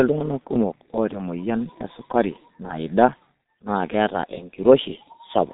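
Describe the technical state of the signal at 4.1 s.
At 4.1 s, as throughout, heavy G.723.1 codec damage muffles and roughens the speech, with nothing above 3.8 kHz. The spectrogram shows a hard ceiling, consistent with roughly 6 kbit/s coding.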